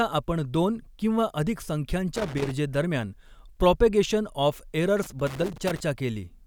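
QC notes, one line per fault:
2.16–2.51 s, loose connector crackle: right after "दोन किंवा अधिक" the speech breaks into an irregular burst of scratching. A worn or dirty contact is making and breaking as it shifts, chopping the signal on and off.
5.03–5.80 s, loose connector crackle: a longer, ragged run of crackle lasting about 0.77 s over the speech. The same intermittent contact keeps opening and closing, so the audio stutters in fragments.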